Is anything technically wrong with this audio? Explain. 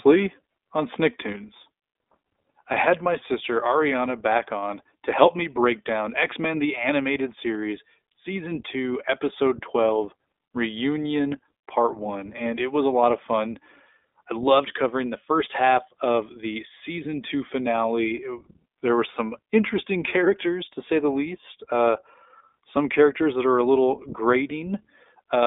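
Yes. Throughout the speech, the iLBC codec is at work. This narrowband VoIP coder handles each 20 ms frame's excitation independently, at a rate that fits about 15.2 kbps, and the audio sits in a telephone-style band of roughly 250 Hz to 3.6 kHz, with nothing above 3.7 kHz. The damage is plainly audible: the speech stays intelligible but sounds thin, muffled and slightly rough, with a synthetic edge from the frame-by-frame coding.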